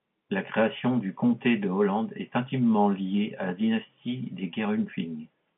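Nothing technically wrong can be heard in this speech recording. It arrives through G.711 telephone coding, so the sound sits in the narrow line band of about 150 Hz to 3.4 kHz, which is normal for a call carried over that path.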